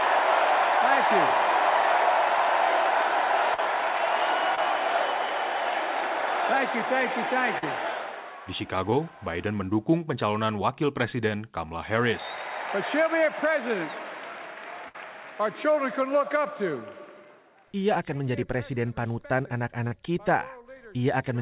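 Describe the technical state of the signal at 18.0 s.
At 18.0 s the audio is intact, with nothing heard above 4 kHz, which fits the narrowband G.711 A-law coding of the call path rather than a fault.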